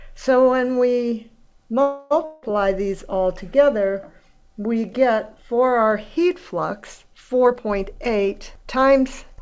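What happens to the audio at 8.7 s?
At 8.7 s the audio is inside a jitter buffer speed-up from 7.46 to 9.41 s. The receiver repeatedly cuts pitch-period slices, about a fifth of a second in all, so the audio runs 111% fast at unchanged pitch and sounds hurried.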